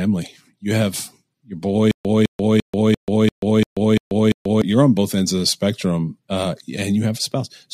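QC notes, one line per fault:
1.91–4.62 s stutter with silent gaps: a 0.21 s fragment returns eight times with 0.14 s of silence between, likely a stalled stream replaying then running dry.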